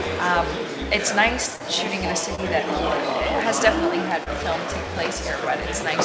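Brief smears or wobbles at 1.56 to 1.61 s, 2.35 to 2.40 s and 4.24 to 4.28 s are short concealed packet loss. About 40, 20 and 20 ms of audio arrived too late, and the receiver bridged each gap by extending the preceding sound. The call path's 8 kHz ceiling stays unchanged throughout.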